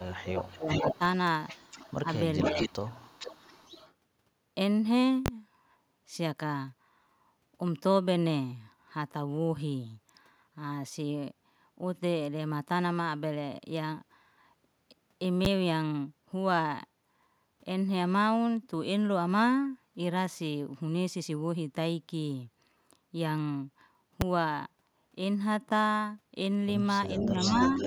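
From the first instant, a delayed copy of the speech trails behind it: a brief trace at 0.0 to 0.04 s, a stronger one from 0.39 to 0.98 s, and a longer stretch from 1.48 to 3.93 s. Each lags the original by about 455 to 458 ms and sits roughly 10 to 20 dB below it. This is echo leak. The far end was likely on a loudspeaker, and its echo canceller let part of the returned sound slip back into the call.

Overlapping that opening, the speech itself sinks and breaks up from 0.06 to 1.01 s, dropping by as much as about 25 dB across most of that second. Shorter dips follow at 2.02 to 2.07 s and 2.42 to 2.77 s, the latter around 20 dB deep. This is speech suppressed in double talk. With both directions active at once, the canceller likely could not tell the talker from the echo and attenuated both.

Three sharp, very loud bangs land at 5.26 to 5.28 s, 15.45 s and 24.21 s. These are invalid numbers at full scale. 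A processing stage produced invalid values that were clamped to maximum output for a whole block, which fits blocks of 1024, 512 and 256 samples respectively.

At the close, from 27.16 s, the speech dips slightly, by about 5 dB, until 27.68 s. From 27.17 s to the end, echo returns at its loudest, about 5 dB under the speech, now lagging by about 487 ms.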